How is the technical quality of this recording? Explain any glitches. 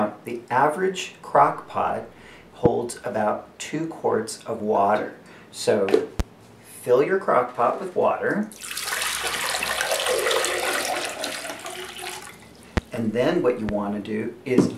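Four loud pops interrupt the recording, at 2.66, 6.20, 12.77 and 13.69 s. Each is a single sharp transient lasting about 26 ms and peaking roughly 15 to 20 dB above the surrounding sound, which continues underneath. The likely cause is a brief voltage spike from a switch, connector, static discharge or driver glitch, shaped by the downstream circuitry into a pop.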